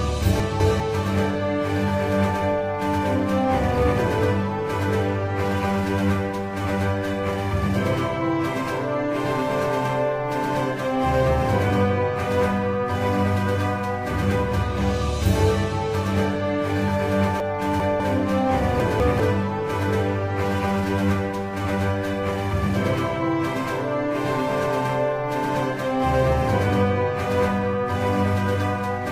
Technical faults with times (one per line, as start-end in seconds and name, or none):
0.40-0.80 chunks out of order
17.40-18.00 chunks out of order
18.80-19.20 chunks out of order